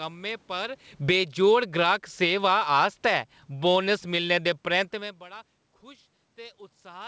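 Speech recorded over a call link shows automatic gain falling from 0.93 to 5.21 s: the gain control drags the level down by about 11 dB, so the waveform envelope and the room-noise floor taper together. Overlapping it, automatic gain rising from 1.32 to 3.49 s lifts the level by about 5 dB; the waveform and the noise between phrases swell in step, brightening the spectrogram's background. On the spectrogram, the call codec's hard ceiling at 8 kHz fits G.722 at 64 kbps.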